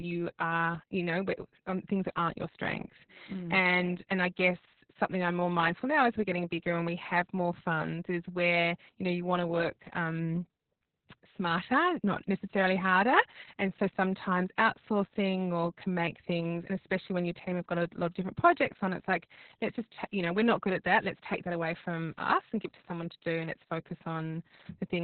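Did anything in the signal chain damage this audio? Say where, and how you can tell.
Yes, at the codec stage, and it lasts the whole clip. The speech sounds muffled, hoarse and faintly robotic, with nothing above about 4.3 kHz. That cut-off is the mark of narrowband Opus voice compression. The SILK linear-prediction coder has dropped the upper band and is quantising the excitation so coarsely that the voice turns hoarse. That degree of damage points to a bitrate around 6 kbps.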